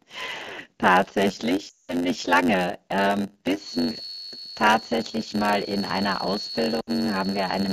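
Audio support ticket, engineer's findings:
Block size mismatch (padded), whole clip: buzz at 91.9 Hz, speech running at 0.919x speed, timbre intact. Short zero-filled gap in every block, stage writing shorter blocks than next reads.

Lost AMR speech frames, 1.69–1.94 s and 6.81–6.91 s: speech dropping to near silence, roughly 180 ms and 60 ms. Fits several consecutive frames concealed with decaying gain, then rough recovery.

Feedback whistle, 3.54 s to end: thin steady 4.4 kHz tone, about 10 dB under the speech, slowly swelling and fading. Likely loudspeaker-to-mic loop sitting just at feedback point.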